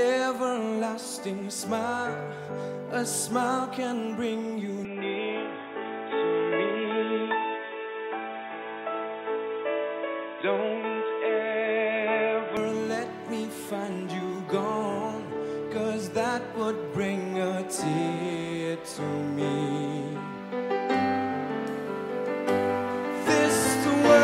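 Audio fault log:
4.85–12.57 s: input switched to a poorer device. The sound turns dull and boxy with nothing above 3.8 kHz, then clears again. There's no gap at either switch, the level barely shifts, and a faint new hiss sits well below. Likely the input hopped to a narrower-band mic and back.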